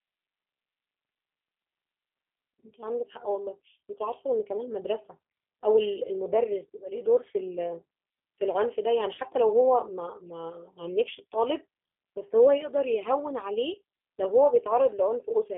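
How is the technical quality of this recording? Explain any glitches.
The technical quality is limited by two faults: narrowband, audibly rough codec coding throughout, and one brief dropout glitch.

Throughout, the speech sounds thin, slightly rough and synthetic. This is the G.729 codec, which rebuilds each frame from a filter and a few pulses at 8 kbit/s within a 250 Hz to 3.4 kHz telephone band.

From 9.15 to 9.2 s, there is a short stretched sound that fades. This is VoIP packet loss concealed by the speech codec: about 30 ms of audio, which fits one lost packet, was extrapolated from the preceding frame.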